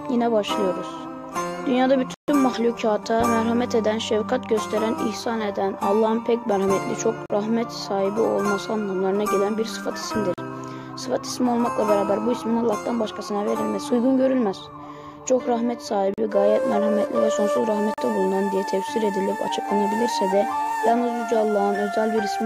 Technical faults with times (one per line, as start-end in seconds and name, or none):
2.14-2.28 block of digital silence
7.26-7.30 block of digital silence
10.34-10.38 block of digital silence
16.14-16.18 block of digital silence
17.94-17.98 block of digital silence